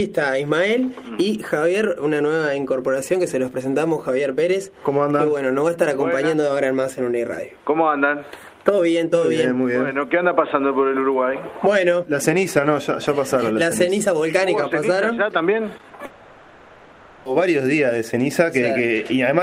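At 15.77, 15.81 and 15.89 s, short concealed packet loss: missing 20, 20 and 40 ms stretches were filled by extending the preceding sound, heard as brief smears.

From 16.05 to 17.27 s, about 1.2 s is replaced by a synthetic, fading continuation of earlier sound, likely a long network dropout, and that content is lost.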